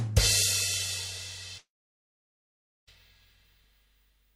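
A long network dropout runs from 1.57 s to 2.89 s. The sound stops arriving, and for a brief moment the last fragment is stretched into a fading buzz before giving way to about 1.2 s of silence. Playback resumes at 2.89 s, but roughly 1.3 s of material is simply gone, so the sound jumps ahead rather than picking up where it stopped. This is likely caused by packets failing to reach the receiver, whose concealment could only briefly extend the last audio.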